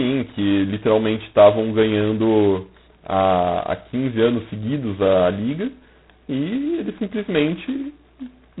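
G.726 ADPCM damage runs throughout: the heavy, level-following rasp suggests the 16 kbit/s mode, coding only coarse prediction errors, and nothing above 3.9 kHz survives.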